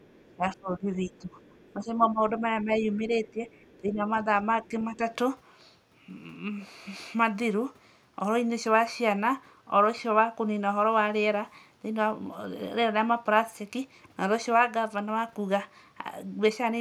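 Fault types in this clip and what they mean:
speech suppressed in double talk: the voice repeatedly dips by about 10 to 15 dB during the first five seconds, likely an echo canceller turning down both talkers at once.
other side's voice leaking through: faint second voice, about 35 dB below the talker, surfaces between 0.05 and 3.78 s, likely as loudspeaker echo the canceller left in.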